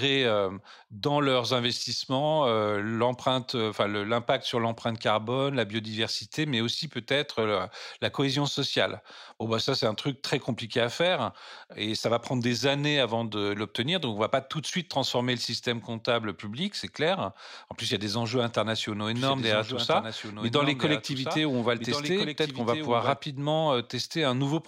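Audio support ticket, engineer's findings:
Doubled audio track, 19.09 to 23.17 s, after "a des enjeux internationaux". A dry copy trails about 1.5 s behind, about 5 dB down, with abrupt edges. Likely a second, slower capture path.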